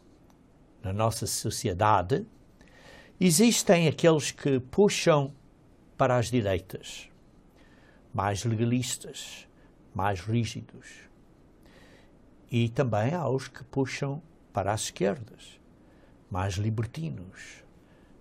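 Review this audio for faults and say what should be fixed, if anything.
Nothing needs fixing, since no technical faults are audible anywhere in the recording.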